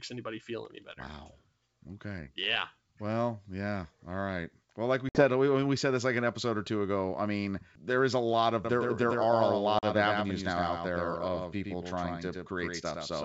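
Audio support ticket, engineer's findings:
Packet loss on the ADPCM call at 5.09–5.25 s, after "like we" and before "we we said this". About 60 ms lost to a hard-edged silent gap. Speech resumes with brief, slight distortion. The decoder's predictor and step size were resynchronising. Second gap at 9.79–9.84 s, about 40 ms.

Doubled audio track from 8.65 s to the end, starting abruptly after "there is a lot". A full-band copy follows about a tenth of a second behind, roughly 5 dB down, with no decay or room colour. Likely a second capture through a slower path.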